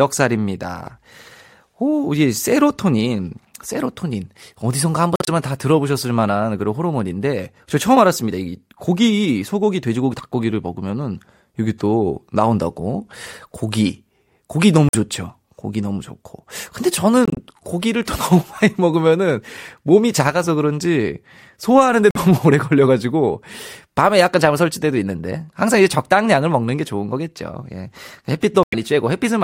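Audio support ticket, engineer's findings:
Corrupt frame muted, five dropouts in the speech: 5.16–5.29 s, 14.89–14.95 s, 17.25–17.39 s, 22.11–22.17 s, 28.63–28.74 s. Each cuts in abruptly and runs about 60 to 140 ms, which fits a run of several codec frames. Decoder rejected bit-damaged frames and the player filled the gap with silence. Timing holds across each gap, so look at the transport or storage path rather than the clock.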